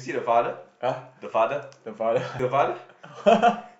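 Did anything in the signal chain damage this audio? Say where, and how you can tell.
Yes, at the codec stage: damaged data in the compressed stream gives short blips at 0.0 s and 2.39 s. The decoder misreads corrupted frames and resyncs at the next header.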